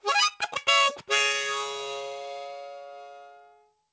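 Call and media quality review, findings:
No faults found in this everyday-sound clip; the call path passes audio normally, with content stopping at 8 kHz, consistent with a G.722 wideband codec.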